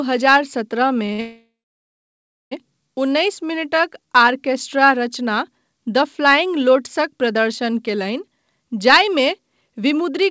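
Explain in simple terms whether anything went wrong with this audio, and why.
Yes, several things went wrong in this speech recording, all from how the call's audio was delivered.

Two short stalls from a late packet come first, at 1.06 to 1.11 s and 1.13 to 1.21 s. Each time a packet arrived late, so the receiver held the last sound for about 30 ms and then 57 ms. You hear a brief drawn-out sound, and nothing is lost.

A call audio freeze follows at 1.21 to 2.53 s. It is most likely the same kind of delay, only much longer. The held sound fades and then goes completely silent for about a second. Unlike the short stalls, it is a clear dropout rather than a slightly stretched sound. The speech then picks up where it stopped.

A jitter buffer slow-down runs from 3.60 to 4.24 s. To rebuild its reserve, the receiver repeated tiny slices of sound, so the speech plays at about 91% speed. The pitch stays the same, which sets it apart from a recording simply played slower.

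A jitter buffer speed-up happens twice. The first is at 6.76 to 7.35 s, right after "द फ्लाइंग". The second is at 8.97 to 10.24 s. Both run at about 107% speed. Here tiny slices were cut out rather than repeated, so the speech sounds hurried while keeping its normal pitch.

The call codec also leaves nothing above 8 kHz.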